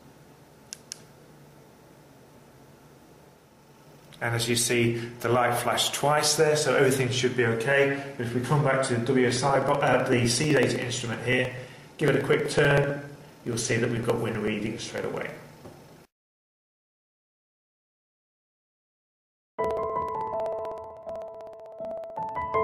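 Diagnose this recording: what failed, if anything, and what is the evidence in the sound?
Network and codec stage: from 3.88 to 5.88 s the adaptive stream switched to a lower bitrate, which fits a drop from about 64 to 32 kbit/s. The quality changes suddenly, without any gap. On a spectrogram, the upper band goes sparse and smeared for those two seconds.

Driver or buffer stage: periodic USB or driver dropouts run from 9.31 to 22.54 s. A blocked bus skips around a millisecond of audio every 63 ms, giving a steady tick of about 16 per second. The waveform shows a couple of hundred evenly spaced discontinuities, and the spectrogram shows thin vertical broadband lines.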